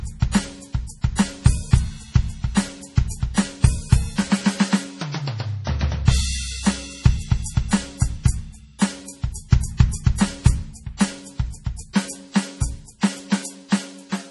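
Right from the start the music sounds watery and swirly with nothing above 11.5 kHz, likely MP3 compression at a very low bitrate, something like 32 kbps. Pre-echo shows up at 2.55 to 2.57 s and again at 8.79 to 8.81 s: block-spread quantisation noise leaks a 20 to 27 ms hiss ahead of each attack, softening it.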